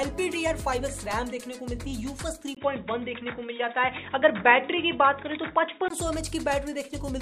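From 2.55 s to 5.90 s the sound turns dull and boxy, with nothing above 3.8 kHz, a brief 20 ms gap at the switch, similar level, and a new noise floor far below the signal. This is likely an input switched to a poorer, narrower-band device.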